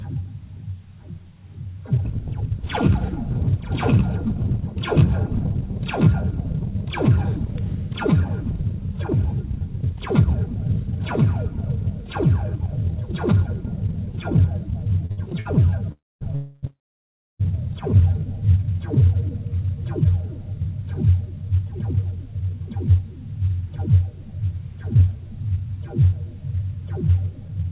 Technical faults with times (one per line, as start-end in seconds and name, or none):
15.06-15.47 repeated stalls (stutter)
15.92-17.41 call audio freeze
20.87-22.95 jitter buffer speed-up
27.41-27.65 jitter buffer speed-up